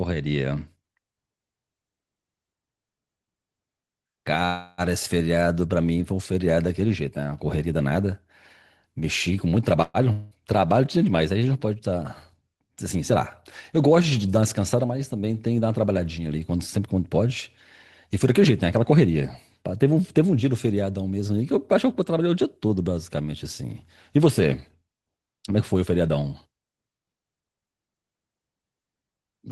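In this speech recording, the sound stalls twice. From 4.45 to 4.81 s, the last sound is stretched into a fading buzz for about 327 ms. Then the speech carries on exactly where it stopped, with nothing skipped. A shorter stall at 9.82 to 9.97 s fills about 121 ms the same way and ends with a brief 10 ms silence. Both are a call audio freeze. The likely cause is packets held up in transit, which let the jitter buffer run empty. The receiver extended the last sound until the late audio arrived, so the delay grew by the length of each gap.

Just after that, at 10.12 to 10.34 s, another fading buzz of about 189 ms is followed by speech that resumes further on, with about 240 ms never heard. This is a long network dropout: the audio likely never arrived and was skipped rather than waited for, which also brought the delay down by around 50 ms.

From 14.24 to 14.87 s, the speech sounds rushed, running at about 110% speed while the pitch stays unchanged. 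This is a jitter buffer speed-up. The buffer held more audio than its target, so the receiver trimmed short pitch-period-sized pieces in quick succession, removing around 70 ms in total to pull the delay back down.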